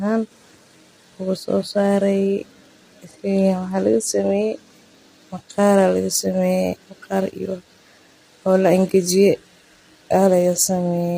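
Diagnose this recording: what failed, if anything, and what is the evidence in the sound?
The fault sits at the codec stage. Throughout the speech the voice is rough and grainy, with noise between the harmonics and a synthetic-sounding top band. This is likely low-delay AAC compression (AAC-ELD), whose short frames resolve pitch poorly. Damage this heavy fits a bitrate near 24 kbps.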